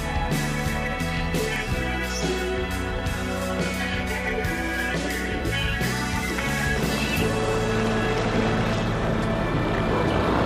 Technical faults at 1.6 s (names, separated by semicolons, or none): bit error spike